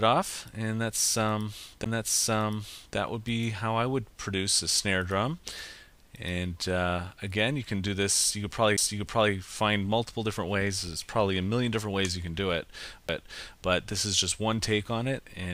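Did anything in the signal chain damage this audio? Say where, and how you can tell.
Yes, the damage is at playback: a CD skip, three times, at 1.84 s, 8.77 s and 13.08 s. At each spot there's a tick and a near-instant dropout, only about 10 ms or so, and then the audio carries on from a different point. That's the laser getting knocked or hitting a flaw, jumping to another turn of the spiral, muting briefly while it reacquires, and resuming off-place.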